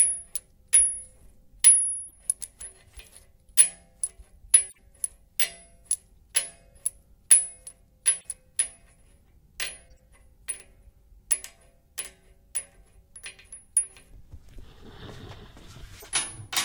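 Corrupt frame decoded at 2.08–2.13, 3.57, 4.69–4.77, 8.19–8.25, 9.91–9.99 and 16.00–16.06 s: damaged compressed frames were played anyway, spraying brief chirps and noise bursts at wrong frequencies, loudest at 3.57 s. Unlike a dropout, spurious energy appears instead.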